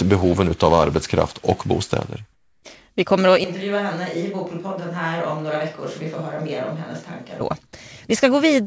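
From 2.33 to 2.63 s, a discontinuous-transmission pause likely stopped the sender's audio during a gap in the speech, and the receiver played comfort noise in place of the background. For those 300 ms, the real room sound gives way to a smooth, featureless hiss, about 6 dB quieter, against a background already about 45 dB below the loudest speech. The change is a brief, flat patch in the ambience.

At 3.44 s the close microphone's signal likely drops out, and the recording makes a switch to a distant microphone until 7.4 s. Because the pickup is now much further from the talker, the speech turns roomy and hollow, thinner in the bass and roughly 10 dB quieter. The room noise rises to about 35 dB below the speech. Both changes are abrupt, and the sound is equally abrupt when the close microphone returns. Throughout the clip, the call codec path leaves nothing above 8 kHz, which fits G.722.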